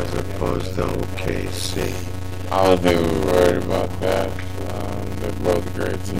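A steady buzz at about 91.9 Hz runs through the whole clip, and the audio plays at 0.533 times normal speed with near-normal pitch. This is a padded block size mismatch. Short written blocks, consistent with 256 samples, are zero-filled to a larger read size, inserting a gap every block.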